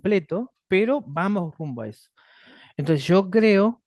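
No technical faults can be heard anywhere in the recording.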